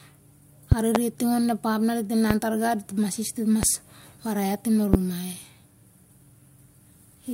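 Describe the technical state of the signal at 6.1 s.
At 6.1 s the speech signal is intact, with no audible fault at that point.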